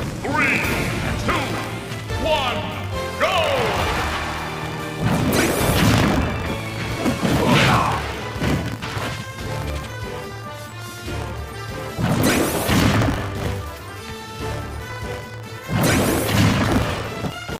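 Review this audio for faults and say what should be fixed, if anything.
A steady robotic rattle at 50 Hz runs through the whole clip whenever sound is present. This is buffer tearing: writer and reader have slipped inside the ring buffer, so a small sliver of each 20 ms period replays audio from about 70 ms earlier, hard-spliced on both sides. Prevent it by keeping the write position safely ahead of the hardware read pointer and resynchronising after any slip.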